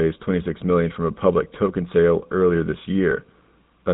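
GSM full-rate codec damage runs through the whole clip, from the first moment to the last. The speech has been squeezed through a vocal-tract model driven by sparse, regularly spaced pulses, so the excitation keeps only a fraction of its detail. That gives the voice a plainly audible buzzy, gravelly roughness. Nothing survives above about 3.8 kHz, leaving the sound dull and boxed-in. The thin, low-rate character fits a 13 kbps channel.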